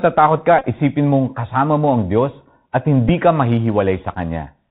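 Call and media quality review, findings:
Bluetooth CVSD headset codec on the voice link, whole clip: 64 kbit/s delta modulation caps the band at 4 kHz. Speech is muffled, s sounds scratchy, granular hiss underneath, loud peaks distorting.

Bluetooth headset packet repeated, 0.59–0.65 s, just before "isipin mong kasama mo": lost packets replaced by re-decoded copies, longest run about 20 ms, giving a short 267 Hz buzz. Brief ticks at 3.09–3.10 s and 4.14–4.16 s.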